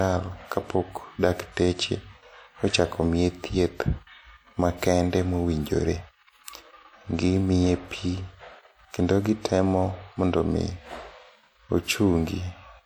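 Clock slip clicks run from 0.11 to 12.82 s, a soft rattle of single-sample ticks roughly every 40 ms through the speech. Two devices likely run on unsynchronised clocks, drifting apart by around 500 ppm, so a sample is dropped or repeated each time the error reaches one sample.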